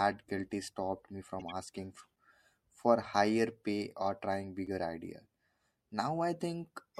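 A corrupt frame decoded in this speech recording produces a brief burst of wrong-sounding energy from 1.39 to 1.52 s, just after "guilty stopped me". Damaged bits in the compressed stream were played instead of being concealed, so misread gains and spectral codes put energy at the wrong frequencies. The result is a short chirpy, noisy blip lasting about 0.12 s, which spans roughly five frames. A gap between chunks cuts the audio at 4.67 s, right after "higher pay or trying". A short hole of about 6.5 ms drops in where two segments meet. The joins fall on a 2.5 s spacing, which points to audio delivered in 2.5 s chunks with padding or a late start at each boundary. Nothing is lost, but the flow breaks abruptly.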